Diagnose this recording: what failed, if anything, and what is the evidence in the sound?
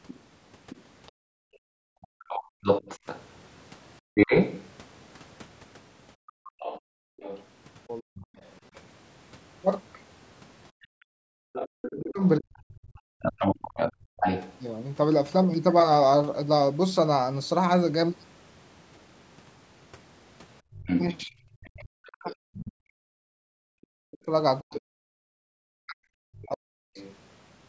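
The failure is in call processing, specifically the echo canceller. The other side's voice leaking through is heard from 0.07 to 14.57 s, at roughly the same level as the talker. It returns from 20.74 to 27.16 s, a little quieter. The second voice sits on top of the main speech. The likely cause is loudspeaker playback reaching the microphone and not being fully cancelled. The residue passes straight into the outgoing signal.

The background is gated by the echo canceller in four places: 1.12 to 2.63 s, 6.16 to 7.19 s, 10.71 to 14.17 s, and 20.61 to 20.74 s. The room sound falls away abruptly, by as much as about 40 dB. Each dip is brief, under a second in the first two spans and around a second in the third. The canceller clamps the microphone while the far end plays, then releases it.

Speech suppressed in double talk appears at 1.76 to 4.12 s, 8.0 to 8.37 s, 11.9 to 13.15 s, and 21.22 to 26.98 s. 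The talker's voice drops out in pieces, by roughly 40 dB at worst. The first span loses only short fragments. The last span is chopped for about five seconds. This likely happens because both ends talk at once and the canceller cannot separate near speech from echo, so it attenuates both. The call's processing also limits the band, with nothing above 8 kHz.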